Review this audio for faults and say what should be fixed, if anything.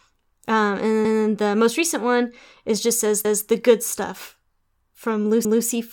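Overlapping chunks cause a stutter at 1.05–1.25 s (just before "the most recent one"), 3.25–3.45 s (after "one is just says") and 5.45–5.65 s (after "the good stuff from"). Each 2-second chunk starts 200 ms before the previous one ended, so that slice of speech plays twice. Unlike a dropout, nothing is lost; the sound is doubled, at a steady 2.2-second spacing. To prevent it, trim or crossfade the overlap so each chunk begins exactly where the last one finished.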